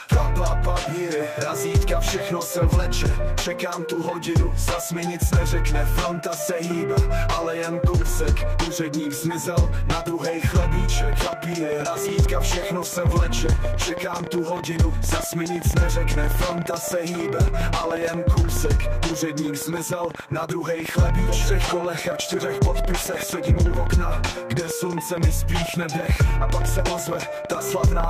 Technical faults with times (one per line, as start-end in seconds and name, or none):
11.13-28.05 train of clicks